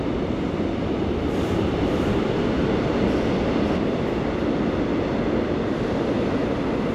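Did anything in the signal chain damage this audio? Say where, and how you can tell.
Yes. From 1.33 to 3.77 s a doubled audio track appears: a full-band copy about half a second behind, roughly as loud, with no decay. It starts and stops abruptly. The spectrogram shows every event repeated at a fixed offset. The likely cause is a second, slower capture path or misaligned edit.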